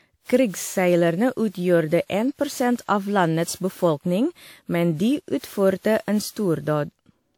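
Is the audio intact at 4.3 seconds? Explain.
No, at 4.3 s the speech sounds swirly, smeared and hollow, with blurred onsets, like the rest of the clip. This is likely generation loss from about seven WMA re-encodes near 96 kbit/s.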